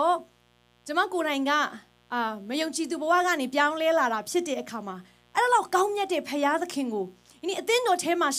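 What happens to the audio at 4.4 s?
At 4.4 s the speech carries a mains buzz, present from start to finish rather than at that moment alone. Switching spikes at twice the 60 Hz mains rate leak into the signal, and their harmonics extend to several kilohertz. The result is a steady, raspy buzz sitting well below the speech.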